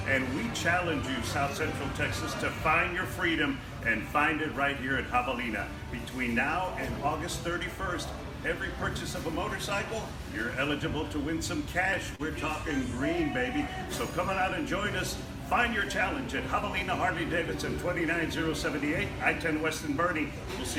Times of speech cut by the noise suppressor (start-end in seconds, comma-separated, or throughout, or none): none